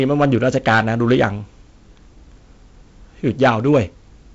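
A speech clip with hard clipping from 0.00 to 1.25 s and again from 3.42 to 3.79 s, overdriven by about 10 dB and 8 dB, giving harsh fuzz; waveform peaks sit flattened, and spectrograms show harmonic smear reaching up to the 7.7 kHz band edge of the G.722 coding.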